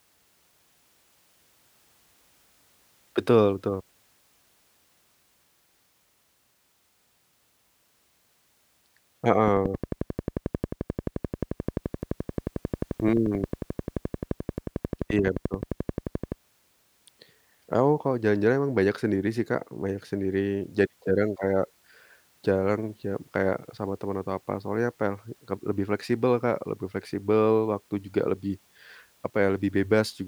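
From 9.48 s to 16.33 s a train of clicks runs over the speech, evenly spaced at 11.4 per second, about seventy in all, standing well above the signal. It ticks steadily through pauses too, likely from interference or a struggling interface injecting repeated pulses.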